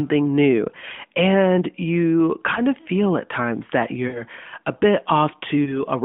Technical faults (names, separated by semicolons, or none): lost AMR speech frames